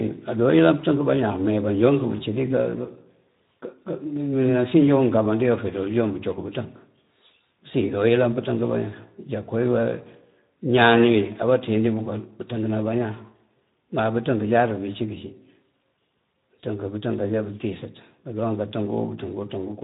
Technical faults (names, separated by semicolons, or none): Speex codec